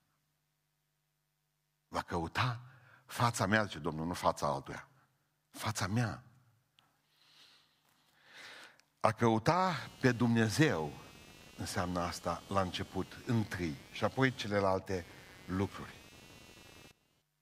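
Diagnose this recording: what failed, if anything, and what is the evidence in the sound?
At 4.72 s, right after "nu fața", the speech jumps ahead, with no gap of silence. Roughly 20 ms of sound seems to be missing, and the two sides are butted straight together. This is a dropped buffer (overrun) at the driver or buffer stage. The likely cause is that the recording software fell behind and the converter overwrote a block of samples before they were collected, so that piece was lost outright.

From 9.67 s to 17.22 s a buzzy, chirping layer sits under the speech, pulsing at around 200 Hz and roughly 25 dB below the speech level. Its texture does not follow the speech at all. This is computer activity noise entering at the analogue wiring stage. Changing load on the processor, graphics card or other hardware shifts the ground shared with the audio input, and that fluctuating current is picked up as this interference.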